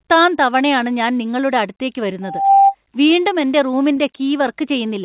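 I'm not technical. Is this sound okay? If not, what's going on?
No. From 2.22 to 2.75 s, just after "തവണയാണ് ഞാൻ നിങ്ങളുടെ അടുത്തേക്ക്", a steady 787 Hz tone swells over about a third of a second into a shrill squeal. This is loudspeaker feedback squeal: a microphone picked up its own loudspeaker and the sound looped round and built on itself.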